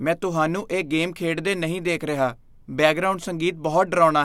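Clock slip clicks run from 0.13 to 4.11 s: about thirty faint ticks roughly every 0.15 s, likely two unsynchronised clocks slipping single samples.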